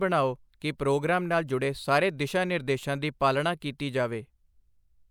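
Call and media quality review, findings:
Nothing stood out on listening to this speech recording.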